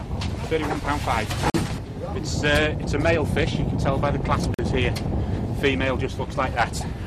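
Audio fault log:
1.50–1.54 s and 4.54–4.59 s: gap between chunks, two 44 ms holes 3 s apart, where the chunk joins picked up silence instead of butting together cleanly.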